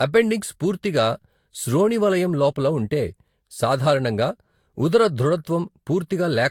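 Generation loss runs throughout: the speech is swirly, hollow and smeared, consonant attacks blur, and nothing remains above 19 kHz. It likely comes from about four Vorbis passes near 74 kbit/s, each requantising on a shifted frame grid, so noise and spectral holes accumulate.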